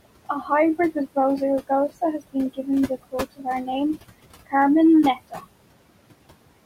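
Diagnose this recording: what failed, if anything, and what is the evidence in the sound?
The fault sits in call processing, at the noise suppressor, and it runs through the whole recording. The room noise, roughly 14 dB below the speech, is pulled down by about 21 dB in the gaps, then swells back underneath each phrase as the gain opens. These are noise suppressor artifacts: the processor estimates a steady noise floor and subtracts it band by band.

The same stage produces speech cut by the noise suppressor at 0.25–0.5 s, 3.36–3.46 s and 5.16–5.44 s. In each window the speech drops by about 20, 20 and 18 dB respectively, over roughly a tenth of a second in the first two and somewhat longer in the third, so the sounds there come out swallowed and faint. Low-level speech energy fell below the suppressor's noise estimate and was attenuated along with the background.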